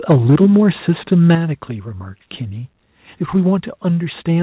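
From 0.1 to 0.57 s, microphone overload, likely from an input volume set too high, drives the peaks about 4 dB past the converter's limit. A small share of the waveform, about 5%, is flattened, giving the loudest syllables a harsh, crackling edge. At 0.12 s, early in that stretch, the microphone volume steps down by about 2 dB, likely because the call software reacted to the clipping. The level drops slightly, but the overload continues until 0.57 s.

Between 1.12 and 1.32 s the microphone overload returns, likely from the same excessive input gain. It runs about 3 dB over, and only a small fraction of samples is clipped, so the crackle is lighter. At 1.35 s the microphone volume steps down sharply, by about 7 dB, likely the software cutting the gain again after the distorted peak. The sound and its background both drop abruptly.

At 3.35 to 3.37 s a brief microphone overload, about 1 dB over and likely from the input still running hot, clips the peaks into a short crackle. 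Throughout the clip nothing is heard above 4 kHz, which fits a narrowband telephone codec on the call path.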